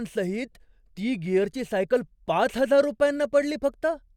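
A short speech recording with no technical faults audible anywhere in it.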